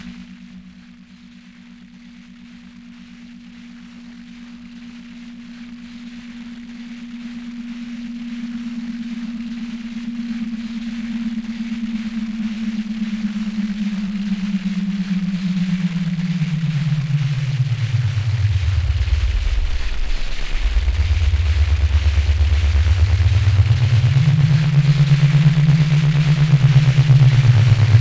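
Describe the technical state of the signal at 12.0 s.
At 12.0 s the signal is intact, with no dropout, clipping, distortion or other fault audible in the sound at that moment.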